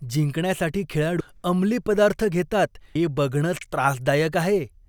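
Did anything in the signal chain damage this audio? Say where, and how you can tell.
Yes, there's audio missing between chunks at 1.20 s, just before "अंमली पदार्थ घेतात", and again at 2.95 s, right after "अंमली पदार्थ घेतात". Each time, about a third of a second of speech drops out and the two sides butt straight together with no gap of silence, so it sounds like a skip. It's likely happening at the buffer or recording stage, where the capture loses a slice each time it closes one block and opens the next. The spacing suggests it's working in roughly 2-second chunks.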